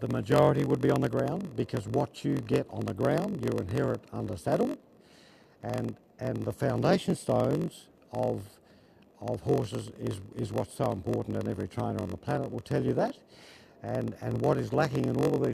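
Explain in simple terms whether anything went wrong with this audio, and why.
Block size mismatch (padded), from start to finish: one stage hands over shorter chunks than the next expects, which fits a 1024-sample block, and fills the shortfall with silence. Those tiny gaps make a 46.9 Hz buzz, and the audio plays at 0.938 times normal speed while keeping its timbre.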